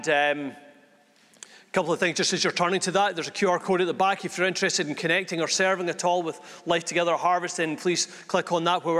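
No technical faults can be heard at any point in the audio.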